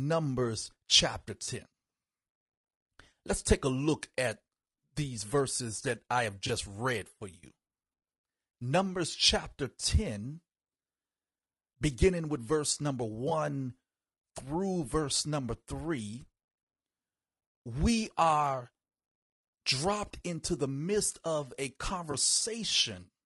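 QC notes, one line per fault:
throughout: low-delay AAC compression. The speech sounds rough and grainy, with noise between the harmonics and a thin, synthetic top end. That's likely AAC-ELD: its short frames resolve pitch harmonics poorly, and the damage fits a bitrate around 32 kbps.
1.45–1.48, 6.47–6.50 (between "verses that I have" and "read for you"), 13.29–13.32 (after "beginning with verse number"), 22.11–22.14 (after "the midst of a"): AAC frame loss with concealment. Each is a brief smeared, phasey blip where the decoder filled about 20 ms from the last good spectrum, which fits a single lost frame.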